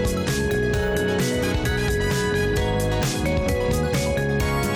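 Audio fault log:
Throughout: MP2 compression. The sound is dull and carries a gurgling, granular roughness that stays audible for the whole clip. This likely comes from MPEG Layer II coding at a rate that fits around 80 kbps. At that budget the encoder cannot give bits to all 32 sub-bands, so upper bands drop out and flicker between frames. The bands that remain are quantised coarsely, which produces the grainy texture on top of the lost top end.
0.51 to 0.55 s: DAB burbling. A short burst of burbling cuts across the audio for about 40 ms, a span that fits roughly two MP2 frames. This is what happens when reception bit errors, at a low rate of a few per thousand bits, get past the error correction and corrupt the audio data. Wrong samples put short blips of noise into single sub-bands for the affected frames.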